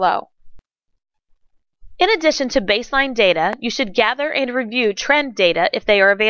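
No technical faults can be heard anywhere in the audio, and the signal stays steady and intact throughout.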